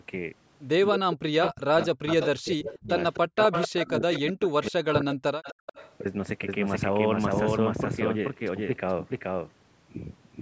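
From 0.9 to 3.39 s, and again from 3.84 to 5.32 s, the speech is suppressed in double talk. Its level sinks by as much as roughly 40 dB, with about one and a half seconds in each stretch dipped or chopped. The likely cause is an echo canceller that heard far-end audio alongside the talker and turned everything down. The clue is that the gaps fall on the talker's own speech, not on background sound between phrases.

Overlapping these stretches is an echo leak: a second copy of the speech trailing the original by 253 ms, likely because the far end's canceller let loudspeaker sound back into its microphone. It appears from 1.81 to 2.28 s at around 10 dB below the speech, and is strongest from 2.65 to 4.32 s at only about 5 dB down. It then thins to a faint scrap from 4.63 to 4.68 s and a quiet tail from 5.12 to 5.95 s, both around 20 dB down. Unlike room reverberation, it is a distinct repeat at a fixed delay.

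From 5.6 to 5.66 s the background is gated by the echo canceller. The room sound drops by about 40 dB for roughly 70 ms and then returns. The dip hits the background rather than the speech, and it is far shorter than the double-talk cuts.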